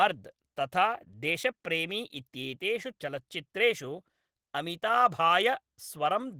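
From start to finish the speech carries plainly audible Opus voice compression. The coarse, slightly hoarse and faintly robotic texture sounds like Opus in hybrid mode, with the SILK linear-prediction coder handling the lower band and a thin CELT layer covering the top. The band isn't narrowed; the highs are there. The damage is in how coarsely the excitation is coded in 20 ms frames, which fits a rate around 16 kbps.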